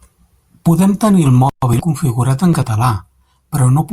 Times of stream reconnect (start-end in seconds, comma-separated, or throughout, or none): none